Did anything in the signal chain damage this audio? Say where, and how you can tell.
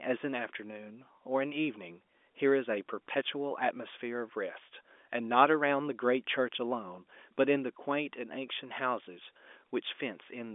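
No, nothing in the chain damaged this audio.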